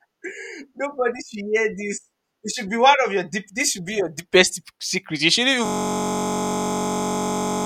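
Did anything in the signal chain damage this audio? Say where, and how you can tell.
Yes. At the driver or buffer stage, a system hang loop takes over from 5.66 s to the end: one 21.33 ms fragment repeats exactly, giving a steady buzz at 46.9 Hz, which fits a 1024-sample ring buffer replaying while the driver froze. Unlike mains hum, the buzz carries the speech fragment's own timbre and begins abruptly.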